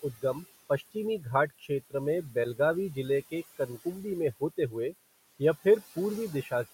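Across the whole speech clip, a noise suppressor treats the steady background as noise and pulls it down by about 15 dB frame by frame. The room noise, sitting about 17 dB below the speech, therefore sinks in the pauses and swells back under each phrase. These noise suppressor artifacts leave the remaining noise rising and falling with the speech.

From 1.5 to 1.7 s, the suppressor mistakes part of the speech for noise and turns it down along with the background, by up to about 16 dB. This speech cut by the noise suppressor affects roughly a tenth of a second in total, so that stretch sounds swallowed and faint.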